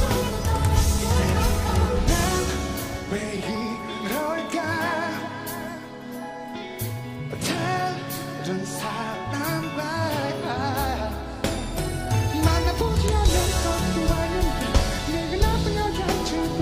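No technical faults can be heard anywhere in the recording, and the signal holds steady throughout.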